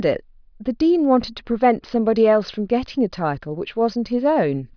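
No technical faults can be heard anywhere in this speech recording. Nothing in the signal path draws attention to itself at any point.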